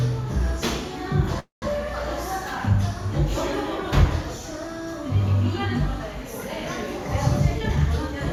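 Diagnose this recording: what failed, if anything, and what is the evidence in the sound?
Call audio freeze at 1.39 to 1.65 s: the sound stalls into a fading continuation of itself, then about 150 ms of silence, before resuming exactly where it stopped. Nothing is lost, but 226 ms is inserted. The likely cause is network delay draining the receiver's jitter buffer.

Jitter buffer speed-up from 7.60 to 8.29 s: the sound runs at about 120% speed with unchanged pitch and feels hurried. The receiver trimmed short pitch-period slices repeatedly, removing about 150 ms to shrink an overfull buffer after delayed packets arrived together.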